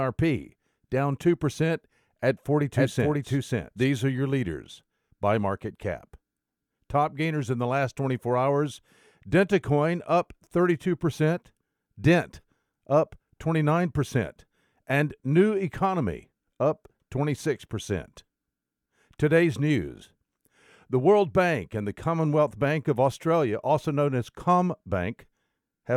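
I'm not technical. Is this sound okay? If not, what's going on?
No. From about 2.76 to 3.84 seconds there's a doubled audio track: the speech plays twice at once, with the second copy trailing about half a second behind and just as loud, so it sounds like a stuttering echo. It isn't a natural room echo, since it's perfectly clean and switches on and off suddenly, ending right before "are your leaders by". The likely cause is the same sound getting picked up a second time through a slower route, or two copies overlapping in an edit.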